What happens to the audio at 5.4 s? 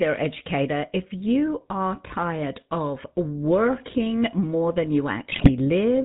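From 5.32 to 5.50 s, right after "of working more than", the sound breaks into GSM bit errors. Corrupted bits reach the decoder, so wrong filter, pitch and gain values distort the spectrum and make the level jump for a few frames at a time. The result is squawks, pops and gargling, consistent with a weak link, perhaps around a 4 percent error rate. Packet loss would leave gaps or smeared repeats. These errors instead produce loud, wrong-sounding bursts.

Under this, and throughout the clip, runs the GSM full-rate codec, which fits a 13 kbps stream. It models the vocal tract and drives it with a sparse pulse excitation, keeping only every third sample. Nothing passes above 4 kHz, and the speech takes on a plainly audible buzzy, gravelly roughness. A plain telephone band-limit would sound dull but smooth. This codec adds grain inside the band itself.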